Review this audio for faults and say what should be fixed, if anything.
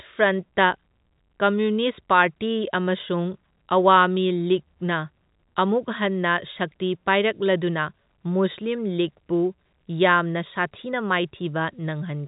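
Nothing needs to be fixed, because no faults can be heard in this speech audio.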